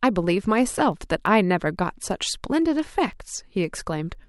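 From 0.24 s to 4.15 s the speech carries word clock ticks: short, sharp clicks arriving at a steady rate of about one every 0.15 s, some twenty in all, with uneven strength. The receiving device is running on its own clock, off by something like 150 ppm, so each time the two clocks slip a sample is dropped or repeated. That regular spacing separates them from random crackle or dropouts, which have no fixed rhythm.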